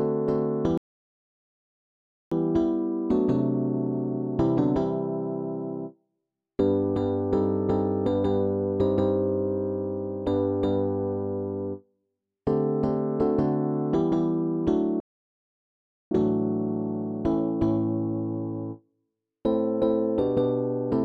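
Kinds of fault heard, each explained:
Playback stall, 0.78–2.32 s and 15.00–16.11 s: the sound halts abruptly for about 1.5 s, then 1.1 s, likely because the player ran short of data.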